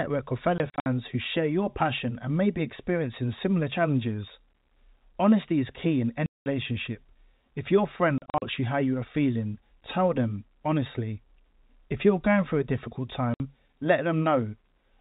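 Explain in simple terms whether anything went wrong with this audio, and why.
The speech drops out in short bursts of packet loss filled with silence, at 0.58–0.86 s, 6.26–6.46 s, 8.18–8.42 s and 13.34–13.4 s. Bits of audio got lost on the way, and the player filled those spots with dead air, leaving holes sized in steps that fit 20 ms packets.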